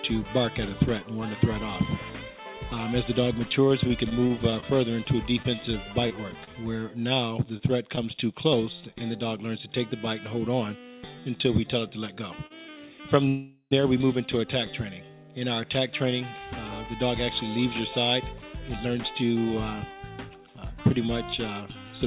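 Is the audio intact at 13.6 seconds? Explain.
No. From 13.28 to 13.73 s packets were likely held up in transit, so the jitter buffer ran dry and the receiver kept extending the last sound: a fading buzz or hiss that dies into roughly 80 ms of silence, all inside a call audio freeze. When delivery resumes, playback picks up exactly where it stopped. Nothing is lost, but about 0.43 s of delay is inserted. The filler stays under the 4 kHz ceiling of the call path.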